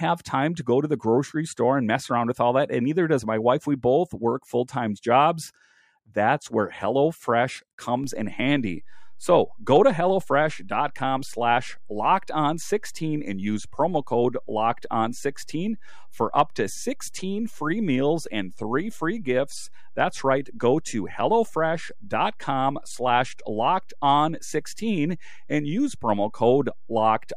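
At 8.04 s a DC step occurs. The zero line of the waveform jumps to a new offset, about -33 dBFS, and stays there until the end of the speech. Something in the chain shifted its baseline. A converter may have recalibrated, or an input carrying an offset was switched in. The step is heard as a single low thump or click. The speech carries on unchanged after it.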